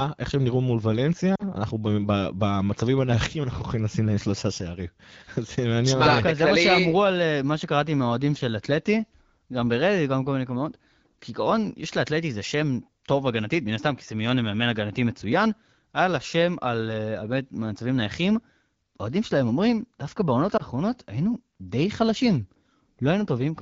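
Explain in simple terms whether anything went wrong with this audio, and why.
Lost AMR speech frames: radio errors twice corrupted small pieces of the call, so the decoder patched each gap by repeating its last good sound at falling volume. You hear a brief drop toward near silence from 1.35 to 1.43 s, and a shorter dip from 20.57 to 20.62 s.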